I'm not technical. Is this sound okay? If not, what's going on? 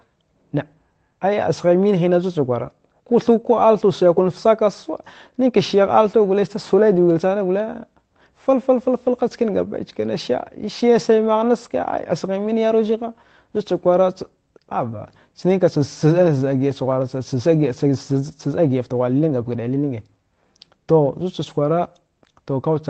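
Yes, no faults heard.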